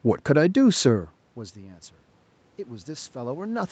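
Speech, carried over a call path with nothing above 8 kHz, shows automatic gain rising from 2.64 s to the end at 3.71 s: after the input drops by about 21 dB, the gain control slowly lifts the level. Unlike a talker moving closer, the room noise swells along with the voice.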